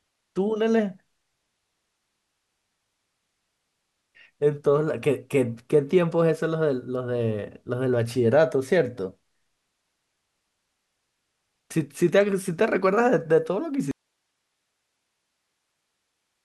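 At 13.91 s the speech cuts out abruptly and never returns. This is an audio dropout to a faint residue. The wanted signal is lost, but the path after the break stays live. What remains is only hiss, sitting far below the speech level, somewhere around 55 dB down. The change is sudden, not a pause or a fade. The likely cause is a lost connection or source feeding a still-open input, and the hiss runs to the end.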